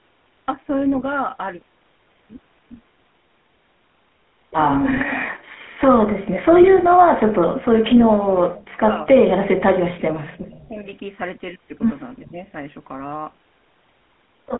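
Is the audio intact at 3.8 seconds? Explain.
No. At 3.8 seconds the speech carries GSM full-rate codec damage, present throughout the clip. The codec models the vocal tract and drives it with sparse, regular pulses, which fits a 13 kbps stream. The band runs from 200 Hz to 3.5 kHz. The voice sounds plainly buzzy and gravelly.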